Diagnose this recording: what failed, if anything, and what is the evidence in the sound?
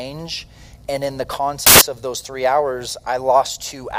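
A sample-format conversion fault, samples built from the wrong bytes, occurs from 1.67 to 1.81 s, a burst of about 0.15 s. The sound abruptly becomes loud, harsh broadband noise for that span. The reader misassembled the bytes of each sample: it was offset by a byte, swapped their order or misjudged the alignment. That promotes the rapidly fluctuating low-order bits into the most significant position, turning ordinary signal into large, near-random values.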